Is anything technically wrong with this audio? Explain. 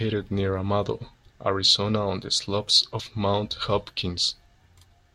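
Yes. At 3.00 s in the speech, compressed frames skipped: roughly one frame, about 20 ms, never plays, so the audio jumps ahead.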